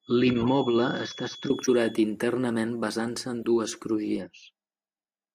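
A loudspeaker-to-microphone loop sitting on the edge of instability is the likely cause of the feedback whistle that runs from the start to 2.06 s. One frequency, 3.4 kHz, keeps ringing without building up, so a thin steady tone hangs behind the speech, roughly 20 dB under it and swelling and fading slowly in level, until it stops just after two seconds.

Corrupt frames decoded appear three times, where damaged bits in the compressed stream were played out rather than concealed. From 0.33 to 0.47 s a run of several bad frames sprays energy into wrong frequency bands, heard as a harsh chirp or noise burst over the whistle. From 1.63 to 1.70 s a few frames produce a shorter blip at a similar level. At 3.40 to 3.45 s a couple of frames give a brief, quieter squeak, about 10 dB softer than the earlier two.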